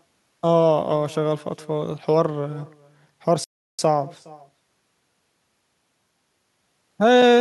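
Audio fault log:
Throughout, echo with no canceller: every phrase of the speech is followed by a faint, thin copy arriving after a delay of around 0.4 s, sitting about 25 dB below the direct sound. The far end is playing the call over a loudspeaker, its microphone is picking that playback up, and nothing is cancelling it, so the talker's own voice returns after the full network round trip as a quiet trailing shadow.
3.44–3.79 s, playback stall: the speech cuts to silence in mid-flow for about 344 ms, then resumes. A gap of this kind, with the sound simply halting rather than crackling or warping, points to the player being starved of data or having its audio thread held up, likely a buffer underrun, so the output had nothing to send until the supply recovered and playback carried on.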